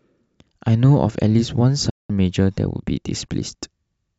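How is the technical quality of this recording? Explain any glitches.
The recording has one glitch, a digital broadcast dropout from 1.90 to 2.10 s. The receiver stopped getting valid frames, most likely from signal loss or failed checksums, and muted until clean data resumed, a gap that fits about six lost frames. The speech fades out within 8 ms, leaves roughly 190 ms of silence, then resumes with that stretch missing.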